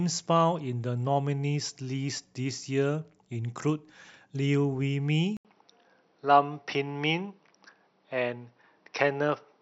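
At 5.37 s, an 80 ms waveform gap, speech spectrally cut flat above 5.9 kHz, with faint new background noise: likely input switched to a poorer device.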